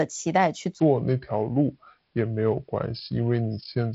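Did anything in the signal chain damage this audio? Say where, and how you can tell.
Yes. From 0.80 s to the end, the speech drops about seven semitones and drags at 0.70× speed: a section at the wrong speed, likely played against a mismatched playback clock.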